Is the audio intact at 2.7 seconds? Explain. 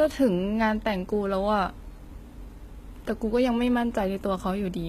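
No. HE-AAC compression runs throughout, including 2.7 s: the treble is likely rebuilt by spectral band replication, leaving gritty, metallic sibilance and nothing above 14.9 kHz, which fits a bitrate near 20 kbps.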